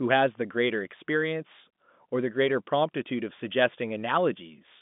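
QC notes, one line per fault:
Nothing to flag here, just ordinary telephone-band speech through G.711 coding, with the top end stopping around 3.7 kHz as you'd expect from a phone line.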